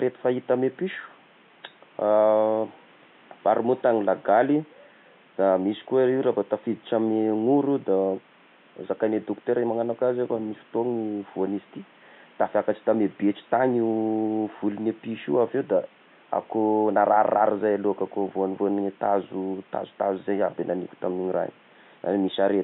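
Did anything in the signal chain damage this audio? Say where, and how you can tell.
No, nothing in the chain.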